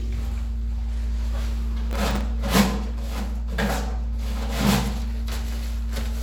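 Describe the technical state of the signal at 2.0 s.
At 2.0 s you're in the middle of a processor overload crackle, running from 1.91 to 2.21 s. The processor keeps missing deadlines on tiny buffers, under a millisecond each, and about fifteen drop out as silence, so the sound turns gritty and torn until the load eases.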